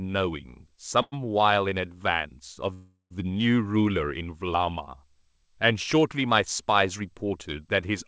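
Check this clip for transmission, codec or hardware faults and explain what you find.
Two call audio freezes show up in the speech. At 1.02 to 1.14 s and again at 2.74 to 3.12 s, packets likely got held up and the jitter buffer ran dry. The receiver stretched the last sound into a fading buzz, which dies to brief silence before the speech carries on from where it stopped. Nothing is lost, it just arrives later. The first hold is about 0.1 s and the second about 0.37 s, with the longer one going quiet for longer. All of this sits within the G.722 call band, which stops at 8 kHz.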